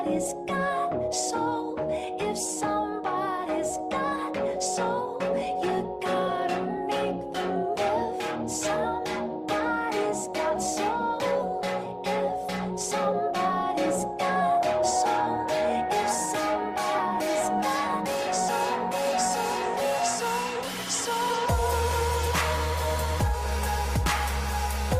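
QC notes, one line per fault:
No faults found on a full listen of the clip.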